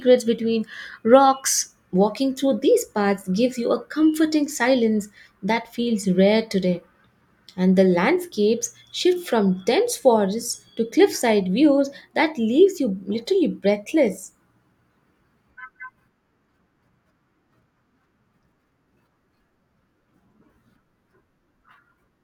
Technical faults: none

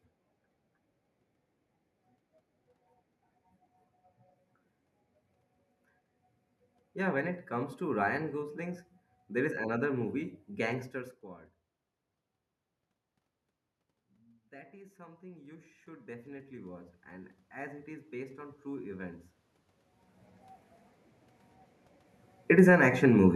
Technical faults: automatic gain rising

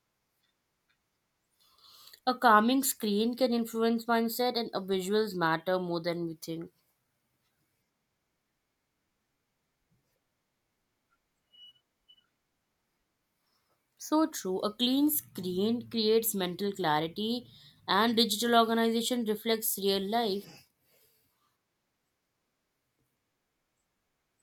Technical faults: none

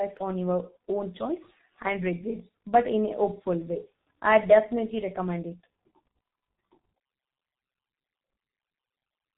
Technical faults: G.723.1 codec

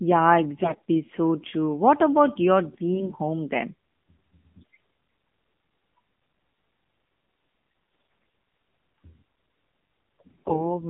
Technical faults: AMR narrowband mobile codec; AMR bit errors

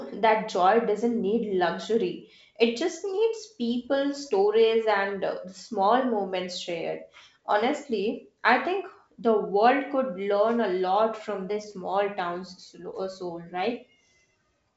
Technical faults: none

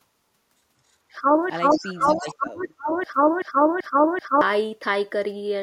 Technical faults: broken-record loop; echo leak; speech suppressed in double talk

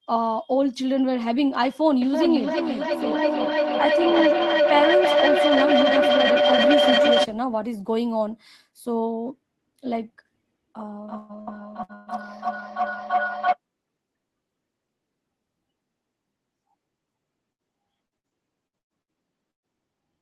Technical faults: feedback howl; repeated packet loss (robotic sound); burst of packet loss

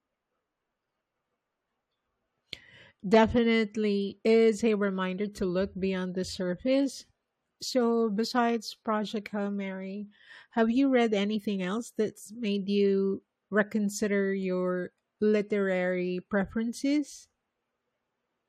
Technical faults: none

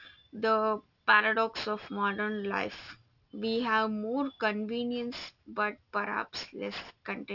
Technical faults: aliasing

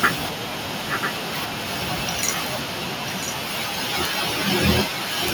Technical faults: echo leak

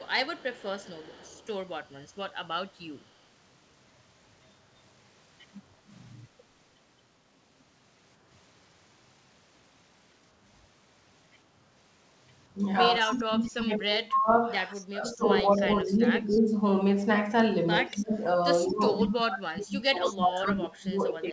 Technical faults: echo leak; speech suppressed in double talk

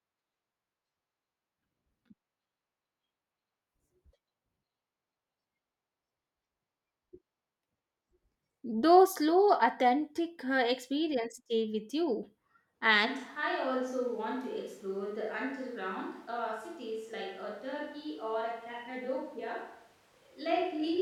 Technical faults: switch to a distant microphone

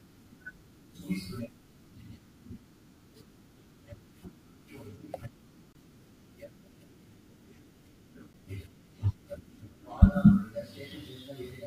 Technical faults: corrupt frame decoded

